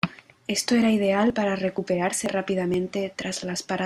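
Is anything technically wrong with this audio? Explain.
Yes. There is audio missing between chunks: the speech skips at 0.34, 0.82, 1.30, 1.78, 2.26, 2.74 and 3.22 s, losing roughly 20 ms each time. The cause is likely that the processor drops audio while closing one half-second chunk and opening the next, then joins the two sides directly. Each skip shows as an abrupt discontinuity in the waveform and a thin vertical seam in the spectrogram.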